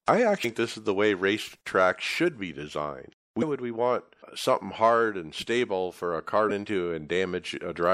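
Throughout the speech there's a plainly audible watery, swirly quality with smeared attacks, likely from MP3 compression at a rate that fits 64 kbps. Weak frequency content is dropped and flickers frame to frame. Damaged data in the compressed stream shows up at 0.41 to 0.45 s, 3.39 to 3.43 s and 6.47 to 6.51 s. At each spot the decoder misreads the corrupted frames and loses sync, giving a brief glitch about 40 ms long.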